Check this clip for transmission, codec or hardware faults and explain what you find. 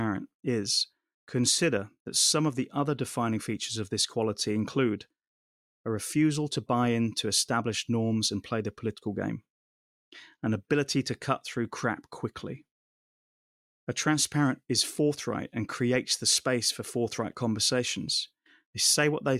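Nothing here gives me anything to flag; the speech comes through steady and intact, so there's really nothing to report.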